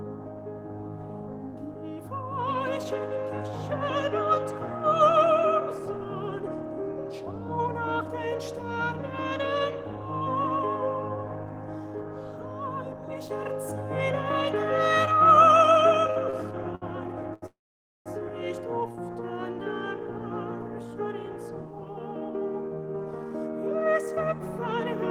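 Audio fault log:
16.10, 16.30, 16.75 and 17.34 s, short stall from a late packet: four quick hiccups in just over a second. Each time the next packet wasn't there on time, the jitter buffer ran dry, and the receiver stretched the last bit of sound to cover it, for about 57, 30, 66 and 84 ms. You hear a held, slightly buzzy smear, then the audio picks up right where it left off. Nothing is actually lost, but everything after each stall lands a little later.
17.46 to 18.08 s, call audio freeze: right after those stalls the stream stops for about 0.6 s. The receiver first carries the last sound on as a short fading buzz, then drops to silence for roughly half a second before the audio resumes from exactly where it stopped. The likely cause is packets held up in transit long enough to empty the jitter buffer completely. A gap gets inserted rather than anything cut out, so the rest of the clip runs that much later.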